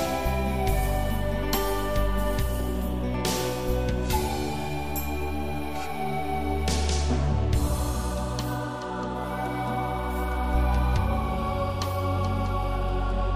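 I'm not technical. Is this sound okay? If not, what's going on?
Yes, it's fine; nothing in this sound needs fixing.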